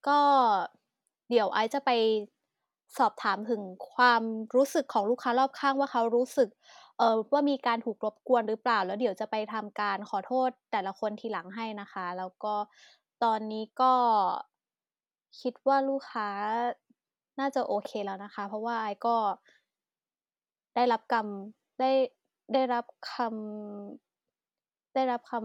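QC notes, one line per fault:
No technical faults were heard in the speech signal at any point.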